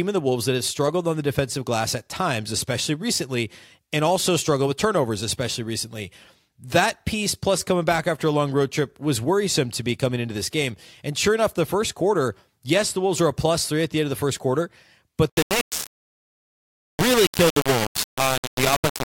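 Low bit depth without dither from 15.30 s, after "of the first quarter", to the end: likely three-bit rounding, with error near the signal's level, leaving gritty, sputtering distortion.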